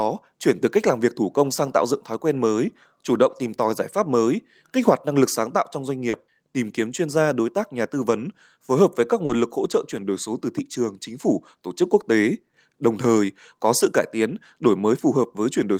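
Speech, with two brief dropouts. Short concealed packet loss shows up at 6.09 to 6.15 s and 9.25 to 9.31 s. About 40 ms of audio goes missing each time. The receiver bridges it by extending the preceding sound, which gives a quick smear or wobble before the real signal resumes. A lost packet rebuilt from error correction follows each gap, at 6.13 to 6.15 s and 9.29 to 9.35 s. It lasts 20 ms and then 40 ms, which suggests one packet and then two. Here the decoder plays a low-bitrate backup copy carried in the next packet, so nothing drops out. Those frames sound rougher and noisier.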